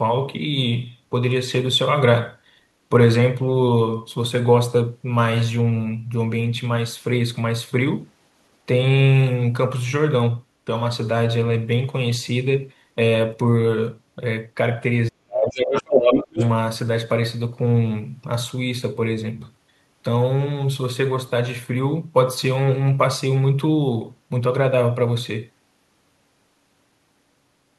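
From 15.1 to 15.96 s the talker's voice sinks sharply, by around 40 dB at its deepest, in speech suppressed in double talk: both sides were likely talking at once, and the echo canceller, unable to tell the talker from loudspeaker echo, turned everything down. Overlapping this, from 15.41 to 16.49 s, a second voice comes through at roughly the talker's own level. This is the other side's voice leaking through, likely far-end playback the canceller failed to strip from the microphone. At 16.31 to 16.39 s a brief dip of around 20 dB returns, another moment of double-talk suppression.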